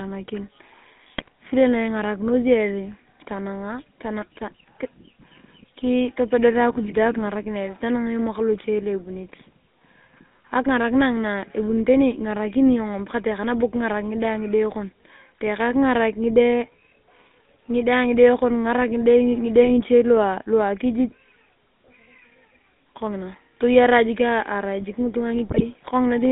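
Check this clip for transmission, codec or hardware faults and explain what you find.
Two faults are present: GSM full-rate coding across the whole recording, and three short bursts of GSM bit errors.

GSM full-rate codec, throughout: the speech sounds buzzy and gravelly, with a band limited to roughly 200 Hz to 3.6 kHz, which fits the 13 kbps full-rate codec. The codec replaces the real voice source with a regular pulse train, keeping only a thinned-out excitation that drives a simple vocal-tract filter. That coarse excitation is what gives the rasping roughness, and the missing top end makes the voice dull and boxy.

GSM bit errors, at 1.08 to 1.28 s, 19.62 to 19.69 s and 25.48 to 25.66 s: the voice breaks into squawks, pops and gargling, with the highest bit error rate in the last burst and the lowest in the brief middle one. Corrupted bits reached the decoder as wrong filter, pitch and gain values, so each affected frame is rebuilt with a distorted spectrum or a sudden jump in level.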